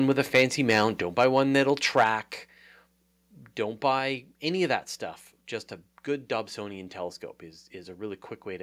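The microphone input was likely set too high at the start, so the loudest speech peaks overran the converter. Microphone overload shows up from 0.34 to 0.43 s, about 6 dB over, and from 0.69 to 0.84 s, about 5 dB over. A few percent of samples there have their tops sheared flat, which puts a harsh, crackly edge on those syllables.

At 1.02 s the call software likely reacted by stepping the microphone volume down, cutting about 4 dB in one move. Speech and background drop together, abruptly rather than in a smooth fade.

The overload returns, though more lightly, from 1.18 to 1.39 s at about 2 dB over. Only a small fraction of samples clip, so the grit is fainter. From 1.97 to 2.07 s it is back at about 5 dB over with a few percent clipped, and the harshness is clearer again.

Inside that burst, at 2.04 s, the volume steps down a second time by about 5 dB. The level falls sharply right on top of the distorted peak.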